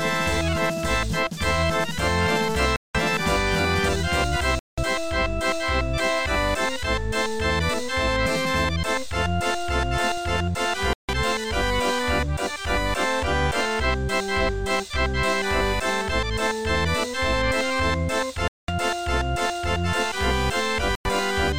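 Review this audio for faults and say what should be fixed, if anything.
Bluetooth stalls, likely from radio interference delaying packets until the headphones' buffer ran dry, cut the sound to silence at 2.76, 4.59, 10.93, 18.48 and 20.95 s, each gap lasting 98 to 205 ms before the sound returned. Keeping the phone close to the headphones, with a clear path and away from busy 2.4 GHz devices, would prevent these dropouts.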